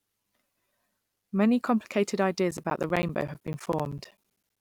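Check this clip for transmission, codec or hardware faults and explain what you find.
One hardware fault is present: periodic USB or driver dropouts, running from 2.51 s to 4.57 s of the speech. Every 64 ms, about fifteen times a second, a blocked bus or stalled driver loses roughly 10 ms of audio, which is replaced with silence. Across about thirty such gaps, the result is a steady, evenly spaced ticking that sounds only while signal is present. The strict regularity sets it apart from network packet loss, whose gaps fall irregularly.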